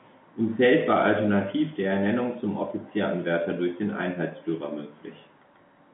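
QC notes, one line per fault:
No faults found; the speech sits in a 150 Hz to 3.5 kHz telephone band with nothing above 3.8 kHz, as expected of G.711 A-law coding at 64 kbps.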